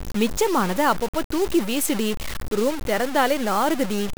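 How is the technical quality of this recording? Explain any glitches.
Poor. The speech carries heavy low bit depth without dither from start to finish. It sounds grainy and harsh. The grit rises and falls with the voice. Quiet passages sputter or drop out. This likely comes from truncating to about 4 bits without dither. The error tracks the signal and sits only about 10 dB below it.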